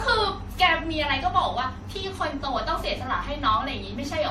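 Throughout the speech there is generation loss: a swirly, hollow, smeared sound with blurred consonant onsets, likely from about ten successive MP3 encodes at a rate near 64 kbit/s. A spectrogram shows nothing above 15.8 kHz and flickering holes scattered across the upper bands.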